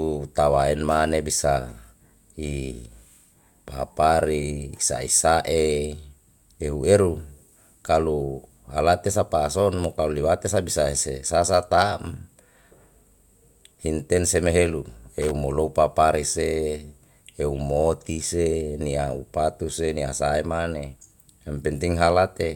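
At 15.22 to 15.31 s the speech breaks into a short, irregular burst of loose connector crackle lasting roughly 0.1 s. A worn contact was making and breaking, chopping the signal. Unlike a single digital click, it sounds ragged and scratchy, with uneven spacing.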